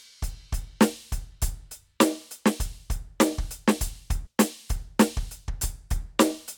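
Damaged data in the compressed stream at 4.25 to 4.27 s: the decoder misreads corrupted frames, loses sync in this music, and briefly breaks up before recovering.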